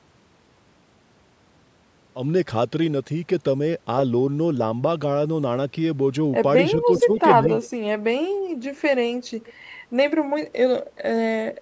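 From 6.76 to 7.12 s the speech dips by about 10 dB for roughly a fifth of a second, likely speech suppressed in double talk; the waveform visibly narrows there. A faint delayed copy of the speech, an echo leak, follows 0.4 s behind at 6.96 to 7.2 s (about 15 dB below), 7.62 s (about 20 dB down) and 9.5 s (about 25 dB down), showing as ghost harmonics below 8 kHz.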